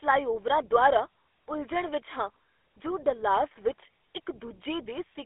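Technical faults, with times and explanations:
Throughout, GSM full-rate codec. The speech sounds plainly buzzy and gravelly, confined to 300 Hz to 3.5 kHz. Coarse pulse-driven vocal tract modelling, fitting 13 kbps, causes this roughness.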